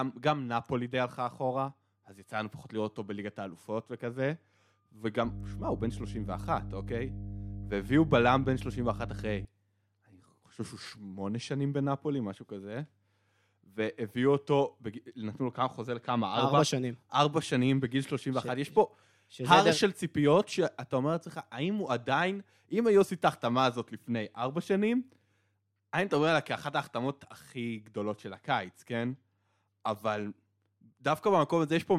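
From about 5.25 to 9.45 s there's a stretch of mains hum, a steady low 50 Hz drone sitting only around ten decibels under the speech. Something like a ground loop or a nearby transformer let the power line bleed into the signal there.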